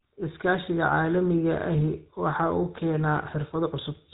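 GSM full-rate coding runs through the whole of this speech. The codec builds each voice from a model of the vocal tract, excited by regularly spaced pulses that keep only one excitation sample in three. That coarse excitation is what gives the voice its plainly audible buzzy, gravelly roughness. Nothing survives above about 3.8 kHz, which strips the air from sibilants. The sound fits the 13 kbps full-rate codec.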